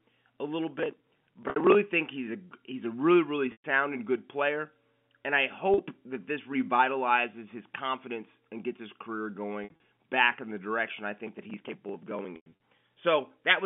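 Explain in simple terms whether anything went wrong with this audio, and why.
Processor overload crackle runs from 0.79 to 1.75 s and again from 11.27 to 12.25 s. The computer fell behind and kept missing its tiny deadlines, each for a chunk of roughly 5 ms. Dozens of those chunks were simply skipped, so the sound breaks into a gritty crackle until the load eases.

Packet loss with pitch repetition happens at 1.50 s (60 ms lost), at 3.52 s after "he's a really really" (120 ms), at 5.74 s after "good player and I" (40 ms), at 9.64 s after "and gets his career" (120 ms in bits over 160 ms), and at 12.36 s (160 ms in bits over 240 ms). Pieces of the stream never arrived. To fill each hole, the receiver repeated the last short stretch of sound. The short gaps sound like a brief buzzy hold, and the longer ones fade toward silence before the speech returns.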